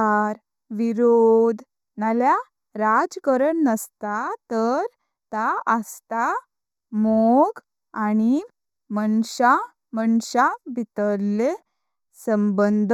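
Speech with channel delay (comb filtering) throughout: one channel lags the other by roughly 0.15 ms before mono summing, carving evenly spaced notches from around 3 kHz, leaving a hollow, dulled sound.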